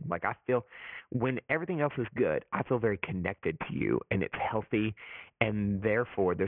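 Speech that was resampled downward without an anti-aliasing filter shows aliasing throughout, and the sound points to a drop to around 6 kHz. Everything above the new 3 kHz limit folded back below it rather than being removed, so the sibilants turn gritty and metallic, and spurious, unrelated tones sit roughly 20 dB under the speech. The spectrum stays dense right up to 3 kHz and then stops.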